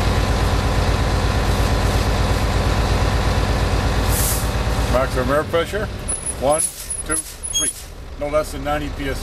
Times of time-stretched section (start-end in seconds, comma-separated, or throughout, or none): 6.72-8.24